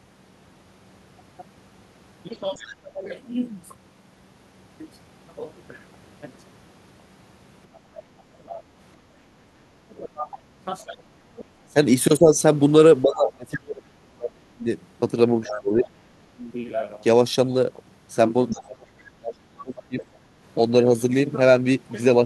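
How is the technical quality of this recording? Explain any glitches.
The recording has two recurring echo-handling problems: a faint second voice breaks through several times, and the main talker is repeatedly turned down, likely while the other side is talking.

Other side's voice leaking through: at 2.54–2.75 s, 7.74–8.61 s, 10.81–10.96 s, 15.47–15.88 s and 18.5–20.05 s, a second voice sits well beneath the talker, roughly 15 to 25 dB down. It is loudest near 15.5 s. This is likely the far end playing from a loudspeaker and getting past the echo canceller. Unlike crosstalk or background chatter, it comes through in scraps and longer stretches.

Speech suppressed in double talk: at 2.82–3.05 s, across 7.91–16.42 s, and at 18.52–20.02 s, the talker's own voice dips or drops out in pieces. The short first dip is shallow, around 15 dB. The later ones go much deeper, around 30 dB, and add up to roughly four seconds in the long middle stretch. 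Two of these dips coincide with the leaked voice. Unlike dropouts from packet loss, the level likely falls while both sides are talking.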